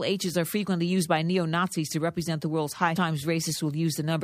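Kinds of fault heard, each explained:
Stream segment skipped: at about 2.95 s, just after "represent the world's high", the speech jumps abruptly forward with a brief blip, losing a chunk of the programme. This likely comes from one segment of the stream failing to load, so the player continued straight on with the next.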